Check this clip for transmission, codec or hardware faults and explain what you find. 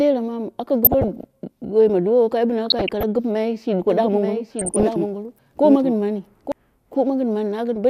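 Two problems here: DAB burbling in three places and a doubled track across the middle of the speech.

DAB burbling at 0.85–1.24 s, 2.66–3.03 s and 4.59–4.83 s: bit errors slipping past error correction knock individual sub-bands around, giving short blips of noise in single sub-bands.

Doubled audio track from 3.9 s to 6.52 s: a second full-band copy runs about a second behind, roughly 5 dB quieter, starting and stopping abruptly. That's likely a slower second capture path.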